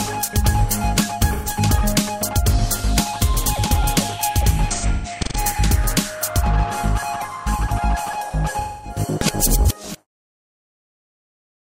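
AAC frame loss with concealment occurs at 1.33 to 1.49 s, 4.71 to 5.38 s and 8.53 to 8.99 s. At each point the decoder, missing packets, rebuilds audio from the last good spectrum, giving smeared, noisy or phasey patches. The first gap is about 128 ms, which fits three lost frames. The second is scattered over 0.6 s, with its longest run around 150 ms. The third is about 256 ms. The closing fade-out, from roughly 9.5 s to 10.07 s, is a deliberate edit.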